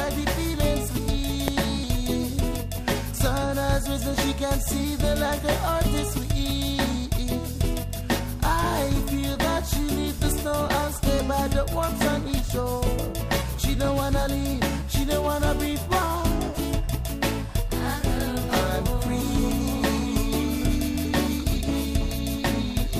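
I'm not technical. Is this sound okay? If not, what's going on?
No. At 1.48 s there is a single sharp bang, caused by invalid numbers at full scale. A calculation inside the audio processing went wrong and produced nonsense values, which the system turned into the loudest possible signal. Here that burst lasts less than a thousandth of a second, so it is heard as one bang rather than two pops with silence between. Unlike an ordinary click, it sounds nothing like the surrounding audio and is far louder than it.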